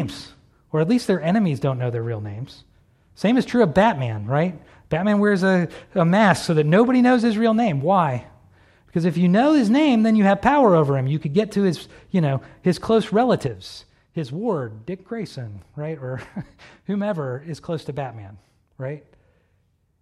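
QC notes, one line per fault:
13.47 s to end: sudden gain jump. Speech and background noise drop together by about 6 dB at once, likely from a gain change applied without a ramp.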